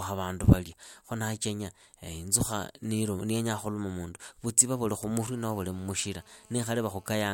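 GSM phone buzz runs from 5.20 to 7.29 s in this speech clip, starting after "khukuma mundu vutsiva vuli": a steady, raspy 217 Hz buzz rich in harmonics, about 32 dB below the speech, from a nearby phone call whose transmit bursts were rectified by the audio circuitry.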